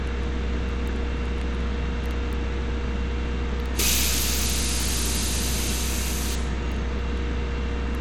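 Throughout the audio, the top end stops at 17 kHz and a gritty, coarse texture sits on the sound, the likely result of Bluetooth SBC compression. Starved of bits, the codec quantises its sub-bands roughly, which fits a low bitrate around 96 kbps.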